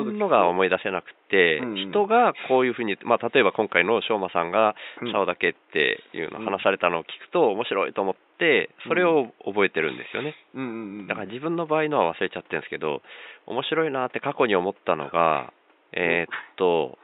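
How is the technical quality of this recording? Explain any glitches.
The technical quality of this recording is sound, with no glitches to explain, only faint room noise about 37 dB below the speech.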